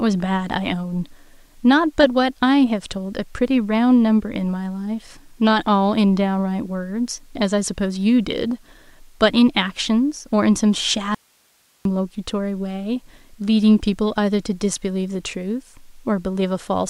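At 11.15 s the speech cuts out abruptly. It returns at 11.85 s. This is an audio dropout to a faint residue, lasting about 0.71 s. The gap is not silent. It holds only hiss, roughly 40 dB below the speech. The break is sudden at both edges, with no fade. The likely cause is a momentary loss of the source signal while the rest of the chain stayed live and kept passing its own noise.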